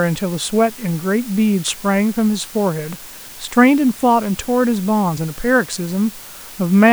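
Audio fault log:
Throughout, low bit depth with dither: there's a steady, even hiss sitting under the speech the whole way, roughly 20 dB below it, which fits a signal squeezed down to around 6 bits. Dither was added before the rounding, so instead of gritty, signal-following distortion, the quantisation error gets spread out into constant white noise. The speech stays clean in shape, just laid over a flat bed of hiss that never pumps or changes.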